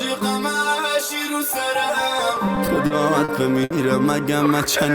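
From 2.35 to 3.72 s the audio shows repeated stalls (stutter): packets arrived late, emptying the jitter buffer eight times, each gap bridged by stretching the last sound, about 190 ms in all, longest 60 ms. It drags and hiccups; spectrograms show smeared, repeated frames, waveforms brief repeated stretches.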